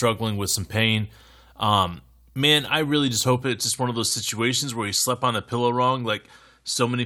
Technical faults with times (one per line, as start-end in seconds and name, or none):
3.42-7.06 input switched to a poorer device